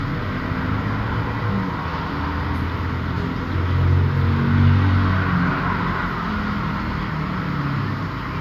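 No technical faults can be heard anywhere in this recording.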